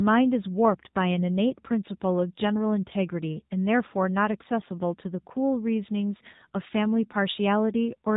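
From start to finish, the speech carries the sound of the AMR narrowband mobile codec, and the damage is plainly audible. Everything above 4 kHz is gone, so the voice sounds boxed in and dull. The codec rebuilds speech from a vocal-tract model fed by a few pulses per 5 ms subframe. Here that model is starved of bits. The result is a buzzy, synthetic edge that fits a low mode of about 7.4 kbps.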